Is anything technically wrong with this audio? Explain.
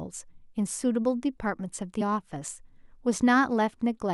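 Yes, there is one fault. From 2.00 to 2.02 s, damaged data in the compressed stream throws the decoder out of sync, giving a brief glitch where frames are misread or skipped.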